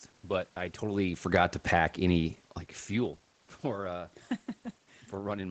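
Nothing stood out on listening to this speech recording.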